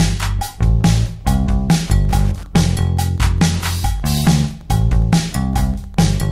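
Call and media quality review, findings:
Wi-Fi interference from 1.72 s to end. Steady ticking every 102.4 ms, about ten a second, roughly 30 dB below signal. Beacon of nearby Wi-Fi radio rectified in audio circuit. Discrete clicks at fixed 102.4 ms spacing, unlike continuous mains hum or buzz.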